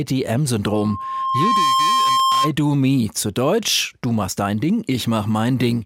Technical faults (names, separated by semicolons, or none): loudspeaker feedback squeal